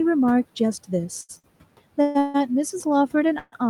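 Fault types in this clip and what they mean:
Short stall from a late packet, at 1.21 s and 1.39 s: the receiver's jitter buffer emptied when a packet didn't arrive on time, so the last bit of speech was stretched to cover the wait, 74 ms the first time and 48 ms the second. Playback then picked up exactly where it left off, so nothing is lost, but a sound lingers slightly too long with a faint buzzy smear, and everything after lands that much later.
Call audio freeze, at 2.02 to 2.17 s, 2.19 to 2.36 s and 3.38 to 3.54 s: the speech halts and the final sound carries on as a fading buzz for 132, 153 and 140 ms, the last one thinning to about 20 ms of silence before speech resumes. This is likely packets held up in transit draining the jitter buffer. Speech continues from where it stopped, so gaps are inserted rather than anything dropped.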